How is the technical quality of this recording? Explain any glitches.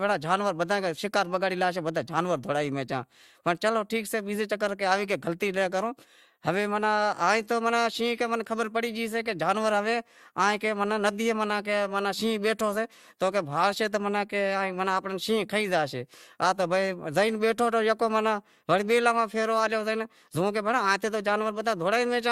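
No audible glitches or faults.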